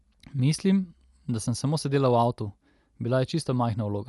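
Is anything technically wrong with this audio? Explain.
Yes. Throughout, the speech is dull, with nothing above 11.5 kHz and a rough, fluttering noise clinging to tones. That is likely Dolby Digital compression starved of bits, which fits a low bitrate around 64 kbps, with dither noise filling empty frequency lines. A plain low-pass filter would leave no such noisy flutter.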